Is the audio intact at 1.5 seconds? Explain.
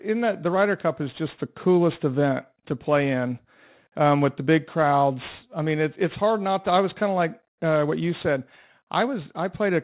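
No. At 1.5 seconds the speech carries aliasing, which runs through the whole clip. The sound points to a drop from 44.1 kHz to 8 kHz without an anti-alias filter, so energy above 4 kHz folds back down below it. Sibilants turn gritty and metallic, with alias tones roughly 25 dB under the speech. A clean low-pass would only dull the top end. Here the highs are replaced by unrelated, harsh components crowding the 4 kHz edge.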